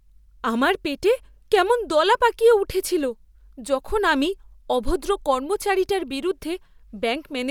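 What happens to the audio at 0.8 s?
Nothing goes wrong at 0.8 s; the speech there is intact, with no dropout, click or distortion.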